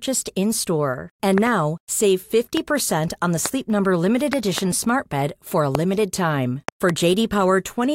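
Loud pops strike at 1.38–1.49 s (a double), 2.57–2.59 s, 3.46–3.48 s, 4.33–4.60 s (a double), 5.75–5.77 s and 6.69–6.92 s (a double). These are sharp thumps about 15 dB above the speech, which continues underneath. They are likely voltage pulses from a switch, plug, static or driver glitch.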